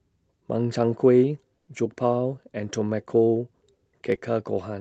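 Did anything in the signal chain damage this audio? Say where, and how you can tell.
Yes. A burst of packet loss on the network at 1.57 to 1.69 s: about 100 ms of concealment, a smeared, fading spectrogram band, then a 20 ms flat waveform gap.

Short concealed packet loss at 4.15 to 4.19 s: 20 ms lost and patched by continuation, showing as a brief blurred spectrogram column and tiny waveform kink.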